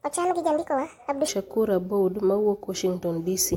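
A speech clip whose opening, from 0.00 to 1.28 s, is a section at the wrong speed: it plays 1.53 times too fast, so the voice sounds hurried and around seven semitones high, likely from being resampled against the wrong clock. On a spectrogram, harmonics and formants sit higher and closer together in time there, then drop abruptly at 1.28 s.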